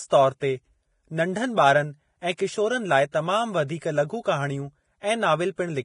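From start to finish the speech carries the marks of heavy low-bitrate coding, likely Vorbis compression at a rate around 28 kbps. Nothing reaches above about 10.6 kHz, and the treble that remains has been quantised so coarsely that fine detail turns into noise of similar energy. The speech comes out hissy and grainy, tonal parts of the speech sound roughened, and consonant onsets lose their sharpness and smear.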